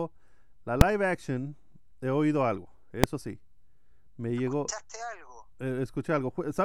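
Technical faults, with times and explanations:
0.81 s and 3.04 s, invalid numbers at full scale: just before "action he oído algo" and again just after it, a processing calculation produced infinite or invalid values that became the largest positive or negative value. Each time the output is pinned at one extreme value, far beyond the speech peaks, for one block, about 2.9 ms at 0.81 s (which fits a 128-sample block) and 0.73 ms at 3.04 s (consistent with a 32-sample block). Both blocks are too short for a separate onset and release pop to be heard, so each one comes through as a single sharp bang.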